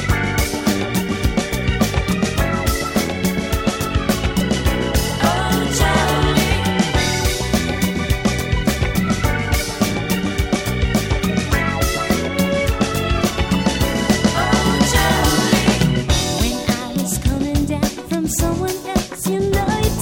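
No technical faults can be heard anywhere in the recording, and the signal holds steady throughout.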